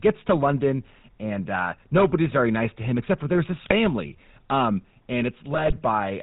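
The whole recording passes through the GSM full-rate codec. The sound is band-limited, with nothing above 4 kHz. The codec rebuilds each stretch from a vocal-tract filter driven by a sparse, regular pulse train. That thinned excitation gives the speech a buzzy, gravelly roughness throughout. The damage is plainly audible and fits the 13 kbps full-rate coder.

At 3.64 s, GSM bit errors break in until 3.73 s. Corrupted bits reach the decoder, so filter, pitch or gain values come out wrong. The spectrum bends and the level jumps. The speech squawks and gargles briefly over what sounds like a few frames.

A second, longer burst of GSM bit errors runs from 5.54 to 5.79 s. More frames are hit here. The popping and gargling last about a quarter of a second.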